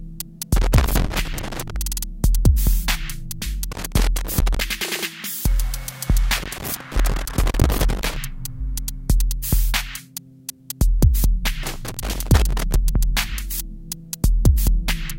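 Loose connector crackle breaks up the sound four times: from 0.56 to 1.76 s, 3.72 to 4.61 s, 6.36 to 8.16 s, and 11.63 to 12.76 s. A worn or dirty contact somewhere in the chain is making and losing contact as it shifts. The signal gets chopped on and off. It comes through as rough, irregular scratching. The longest burst, about 1.8 s long, is in the third span.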